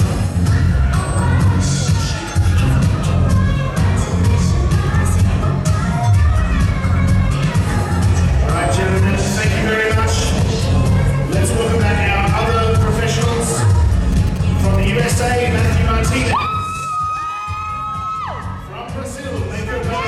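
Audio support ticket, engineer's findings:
GSM signalling bursts, 14.12 s to 15.32 s. Galloping dit-dit-dit of short buzzes, roughly 20 dB under the programme. Buzz pitch sits at 217 Hz, the GSM frame rate. Source: a nearby 2G handset sending signalling bursts, not a call in progress. Mechanism: the RF is rectified in the audio circuit, probably an unshielded input or mic lead, and demodulated into the pulse envelope. Fix: shielding, RF filtering, or move the phone.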